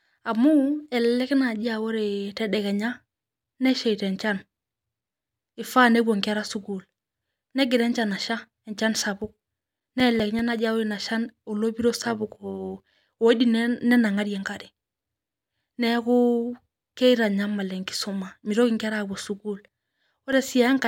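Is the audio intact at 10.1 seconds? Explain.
No. At 10.1 seconds the speech sits inside a run of CD scratch ticks from 9.22 to 10.59 s. A scratch spoils more data than error correction can rebuild, once per disc turn. The player patches the gap, leaving eight regular ticks, roughly six a second, the longest roughly 5 milliseconds long.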